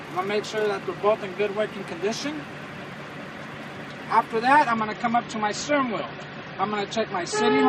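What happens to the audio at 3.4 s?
Nothing goes wrong at 3.4 s; the audio runs through that moment intact, with no dropout, click or other fault.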